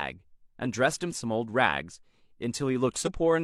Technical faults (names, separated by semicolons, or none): damaged data in a compressed stream